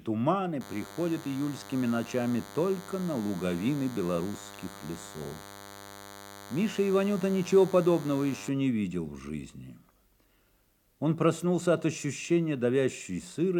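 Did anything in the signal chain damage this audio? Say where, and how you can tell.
Yes. From 0.61 s to 8.49 s a thin, steady buzz sits under the audio, roughly 20 dB below it, then stops. Its fundamental is 100 Hz with a dense harmonic series, which is the signature of DECT cordless phone buzz. This is damage in the analogue wiring stage. A nearby handset or base transmits a radio burst every 10 ms, and the audio input circuitry rectifies those bursts into audible pulses at that repetition rate.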